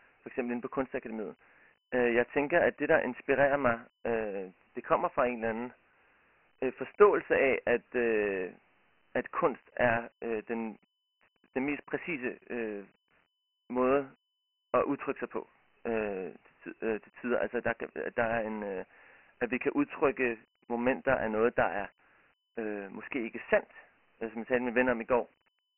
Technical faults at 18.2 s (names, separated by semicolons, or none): Dialogic VOX ADPCM